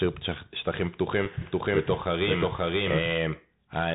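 The whole thing comes through a Bluetooth CVSD headset codec: nothing above 4 kHz, scratchy s sounds and a grainy hiss, which fits a 64 kbps narrowband link. At 1.25 s there's an unconcealed Bluetooth headset packet loss, a single abrupt gap of about 7.5 ms before the audio returns. From 1.41 to 3.13 s a doubled audio track appears, a dry full-band copy at about the same level trailing roughly half a second behind, likely a second capture path. It starts and stops abruptly.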